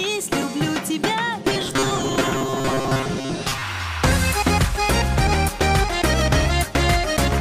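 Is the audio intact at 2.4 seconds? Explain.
No. From 1.48 to 3.62 s the audio has robotic sound from repeated short buffers. It turns into a rigid, metallic buzz fixed at 133 Hz, which fits a repeated chunk of about 7.5 ms. That pitch stays put regardless of what the sound does, and roughly half of the material seems replaced by repeats. The likely cause is audio arriving too seldom, with the last short buffer replayed to fill each gap. Plain dropouts would leave silences, not a steady buzz.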